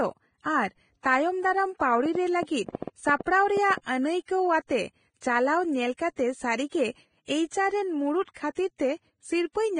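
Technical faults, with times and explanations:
Throughout, Vorbis compression: the speech is hissy and grainy, with blurred attacks and nothing above 9.7 kHz. This heavy damage is likely from a low-rate Vorbis encode, fitting roughly 21 kbps, where coarsely quantised treble turns fine detail into noise.
2.06 to 3.79 s, train of clicks: about ten similar clicks tick over the sound at 6.4 per second with irregular spacing, peaking about 10 dB above it. The likely cause is interference or a faulty connection or power supply injecting repeated pulses.
8.23 to 8.27 s and 8.34 to 8.36 s, pre-echo: a short hiss runs ahead of two attacks, over 47 ms and then 24 ms, softening them. The codec spread quantisation noise across its block, filling the quiet moment before each late attack.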